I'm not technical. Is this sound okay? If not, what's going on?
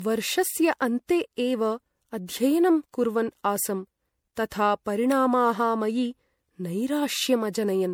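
No. The recording was likely squeezed with MP3 compression, unpacked and squeezed again about four times, and each round added its own damage. This is called generation loss. Throughout the speech, it sounds swirly, hollow and smeared, and sharp starts of sounds are blurred.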